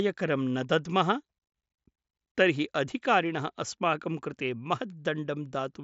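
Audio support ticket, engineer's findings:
No faults found; speech arrives via the Bluetooth mSBC headset link with its expected band limit near 7.7 kHz and light coding grain, nothing further to action.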